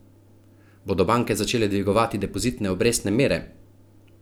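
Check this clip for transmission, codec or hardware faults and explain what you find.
I find no faults in this clip.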